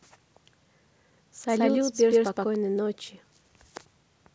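From 1.49 to 2.55 s the speech carries a doubled audio track: a second, equally loud copy trails by about 150 ms, likely from a slower capture path. Unlike an echo, it has no decay or room colour and starts and stops abruptly.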